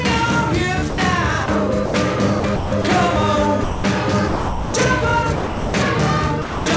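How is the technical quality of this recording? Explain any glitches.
The recording has repeated short dropouts where the sound is replaced by steady synthetic noise. It comes through a band-limited call path, with nothing above 8 kHz, which points to a wideband codec such as G.722 at 64 kbps.

Sound dropped by the voice detector occurs at 0.90–0.98 s, 1.46–1.48 s, 1.86–1.94 s, 3.64–3.84 s, 4.28–4.74 s, 5.36–5.74 s and 6.42–6.66 s. Each gap runs from 20 ms to 460 ms. The sound gives way to flat comfort noise and then resumes. This is likely caused by the sender's voice activity detector classing the material as background and halting transmission, leaving the receiver to synthesise noise.

Sound chopped by the voice detector appears between 2.40 and 2.84 s. Here the detector likely toggled between sending and muting several times, with about 220 ms of that 440 ms stretch replaced by comfort noise. 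The result is a choppy passage with two or more holes where the sound gives way to comfort noise.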